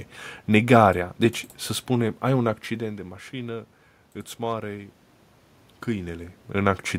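No technical faults can be heard in this speech recording; the background room noise and the shifts in level as the talker moves, once near the middle and again near the end, are part of the recording itself.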